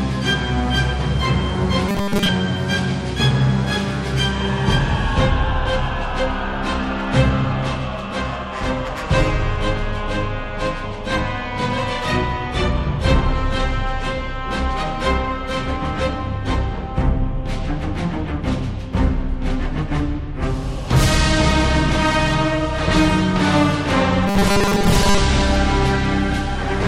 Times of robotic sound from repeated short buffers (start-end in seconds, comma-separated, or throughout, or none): 1.89-2.29, 24.28-25.19